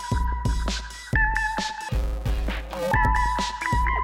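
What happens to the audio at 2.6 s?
At 2.6 s the sound falls inside an interleaved-audio-read-as-planar fault (1.89–2.92 s): 128-sample blocks are split wrongly, leaving it dull, robotic and buzzing at 345 Hz, with evenly spaced 345 Hz bands on a spectrogram.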